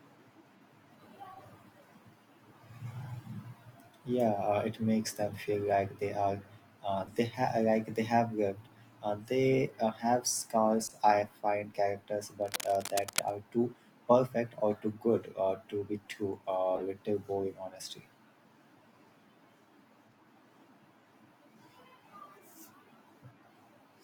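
Speech with two kinds of fault. Corrupt frame decoded errors appear at 4.26–4.28, 5.28–5.36, 7.06–7.12, 10.78–10.94, 15.24 and 16.75–16.82 s. Each is a short chirp, squeak, blip or burst of noise lasting a handful of codec frames, loudest near 16.8 s. On a spectrogram they are brief, blocky patches of energy that don't match the surrounding harmonics. Cable scratch noise, heard as dense, uneven rustling from 12.42 to 13.32 s roughly 10 dB below the speech, is likely from a worn connector being moved. It shows as jagged, broadband speckle on the waveform and spectrogram.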